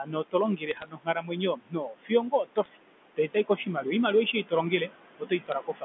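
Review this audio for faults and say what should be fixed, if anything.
Background noise pumps down between phrases, the signature of noise suppressor artifacts. The suppressor pulls steady noise down by about 21 dB frame by frame. Prevention: use a gentler suppression depth with smoother gain tracking.

Speech cut by the noise suppressor makes stretches sound swallowed at 0.00–0.35, 0.57–1.37, 1.53–2.11, 2.31–2.77 s, 3.16–3.86 s (just before "oimaliwa aishe") and 5.19–5.84 s. Quiet parts were mistaken for noise and lowered by about 17 to 20 dB. Prevention: tune the speech detector so soft consonants and low-level phrases are protected from attenuation.

Sharp ticks and brief crackle at 0.69–0.88 s, around 2.64 s, and at 5.47–5.52 s come from bit errors on a digital phone line. Flipped bits on the G.711 A-law path corrupt single samples at a rate of roughly a tenth to a fifth of a percent. 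Prevention: check the digital trunk for a faulty link or clock slips, and add error monitoring on that span.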